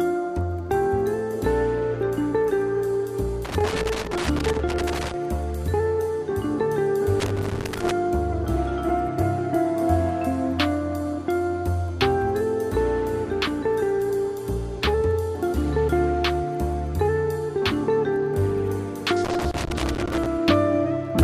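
Loose connector crackle breaks in at 3.45 to 5.14 s, again at 7.20 to 7.91 s, and at 19.25 to 20.26 s. A worn contact is rapidly making and breaking, chopping the signal into irregular scratchy bursts. The waveform shows jagged dropouts and spikes, and the spectrogram shows broadband vertical streaks.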